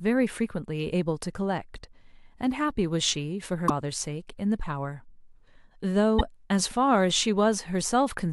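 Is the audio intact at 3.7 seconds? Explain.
No. Right around 3.7 seconds the speech breaks into a brief chirp, squawk, click or short hole lasting from 3.65 to 3.70 s, about 50 ms. This is damaged data in a compressed stream. Some bytes in the encoded file were lost, zeroed or overwritten. The decoder misreads or refuses the frames there, loses its place and hunts for the next valid frame header before clean playback resumes.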